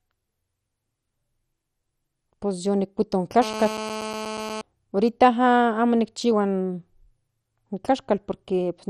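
MP2 compression, throughout: nothing above 13.1 kHz and a gurgling, granular dullness, likely from MPEG Layer II starved of bits, fitting roughly 56 kbps, switching upper sub-bands off. GSM phone buzz, 3.42 to 4.61 s: a hard, raspy, steady 217 Hz buzz at about -10 dB relative to the speech, where the audio circuitry rectifies a nearby handset's call bursts.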